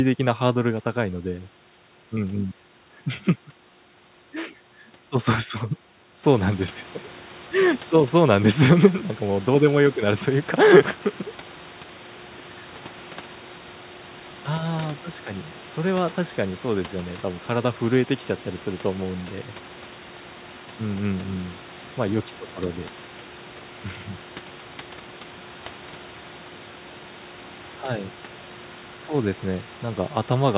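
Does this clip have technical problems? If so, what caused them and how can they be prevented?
No, nothing here points to a technical problem: the room's background sound rises by about 13 dB around 6 s but stays roughly 22 dB below the speech, and the narrow band with nothing above 4 kHz is just what a G.711 mu-law call at 64 kbps normally gives you.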